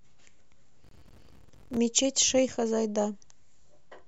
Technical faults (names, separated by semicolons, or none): processor overload crackle